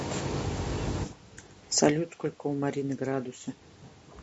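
A short speech clip carries plainly audible coding damage from start to finish, likely from low-delay AAC compression (AAC-ELD) at a rate that fits about 32 kbps. The voice sounds rough and grainy, with noise filling the gaps between pitch harmonics. The content stops near 8 kHz through the call's microphone processing, room noise sits underneath, and level shifts around 1.5 s and 3.5 s follow the talker moving.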